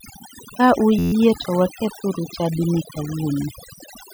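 From start to finish the speech carries overdone noise removal. A noise reduction stage was set so aggressively that any frequency band sitting close to its noise estimate is pulled far down or gated out entirely, and the quieter components of the speech are removed along with the hiss. The result is a background reduced to near silence with sparse, twinkling specks.

At 0.99 s, running to 1.13 s, just before "to wakethuru chadini", there is a system hang loop. The playback path stalled while the audio hardware kept replaying the same ring-buffer segment, so a single 11.6 ms slice repeats about 12 times. At an 86 Hz repetition rate this comes across as a short, steady buzz rather than a stutter, which fits a 512-sample buffer. Essentially no audio appears to be lost once playback resumes.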